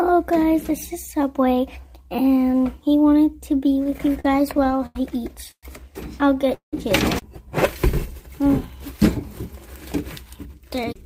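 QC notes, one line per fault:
3.76–4.96 s, repeated stalls (stutter): packets kept arriving late, so the jitter buffer ran dry 13 times, the longest wait 88 ms. The receiver stretched the last sound through each gap, about 236 ms filled in all, so the audio drags and stutters with nothing lost.
5.51–5.64 s and 6.54–6.74 s, call audio freeze: a likely hold-up of packets emptied the jitter buffer, adding 117 ms and then 184 ms. The last sound carries on and fades to silence, 60 ms and 120 ms of it, then resumes where it stopped.
10.25–11.04 s, jitter buffer speed-up: with too much audio queued, the receiver trimmed short pitch-period pieces again and again, roughly a tenth of a second in total. The sound runs about 10% fast at unchanged pitch and feels hurried.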